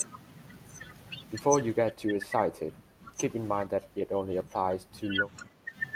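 From 1.9 to 3.18 s, 3.67 to 5.31 s and 5.47 to 5.75 s the speech dips by around 10 dB and thins out: speech suppressed in double talk, likely an echo canceller mistaking overlapping far-end sound for echo. The waveform shows sagging envelopes, and the spectrogram shows faded upper bands.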